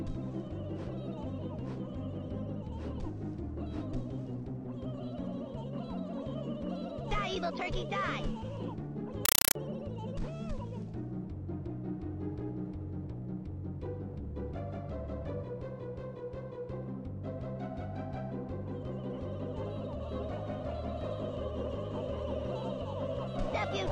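From 9.25 to 9.55 s the audio is replaced by loud, chattering static: a compressed stream played as audio. Undecoded AC-3 data is read as ordinary samples, giving 5.33 ms noise bursts at 31.25 Hz, which fits a 256 kbps stream.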